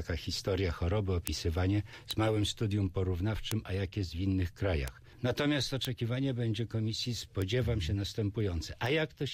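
Seven isolated sharp ticks cut through the audio at 1.27, 2.11, 3.52, 4.88, 5.85, 7.42 and 8.86 s, peaking between about -22 and -10 dBFS. These are bit error spikes. Single flipped bits in memory or a digital link throw one to three samples briefly off by a power of two, producing broadband clicks unrelated to the material.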